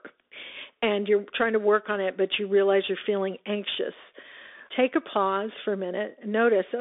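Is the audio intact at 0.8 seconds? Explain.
No. At 0.8 s, as throughout, the speech carries Bluetooth CVSD headset codec damage. One-bit slope coding with an adaptive step leaves a granular hiss and scratchy s sounds, unlike a clean telephone band-limit. Nothing passes above 3.7 kHz, which fits a 64 kbps headset link.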